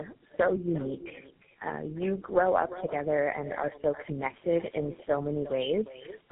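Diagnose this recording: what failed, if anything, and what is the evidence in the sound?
Echo with no canceller, at the call-processing stage. Every phrase is followed by a quieter, thinner copy about 14 dB down, arriving roughly 0.4 s later, throughout. The far end's loudspeaker feeds its microphone, and nothing subtracts that returned signal.

Tandem speech coding, at the codec stage. The speech sounds rough, muffled and warbly for the whole clip, with nothing above 3.8 kHz. The damage fits three low-rate speech coders in a row, ending with something like GSM full rate. Each one re-encodes the previous one's errors.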